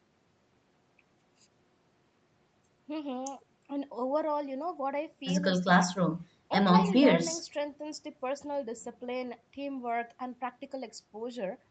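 Nothing stood out on listening to this speech; it carries only the narrowed top end and coding texture expected of a call path.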